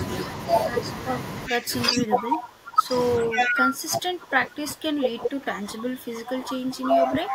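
A speech recording with two echo-canceller faults. Echo leak appears at 1.47–1.58 s, 1.96–2.02 s, 3.32–3.62 s and 7.05–7.11 s as short copies of far-end speech delayed by 402 ms. These most likely come from a loudspeaker path the canceller did not fully remove. The copies sit about 15 dB to about 5 dB below the speech, and the burst near 3.3 s rises to about 5 dB above it. Speech suppressed in double talk runs from 1.48 to 2.93 s and from 3.25 s to the end. The talker's level dips by roughly 20 dB at worst, most likely because the canceller attenuated both sides while they overlapped.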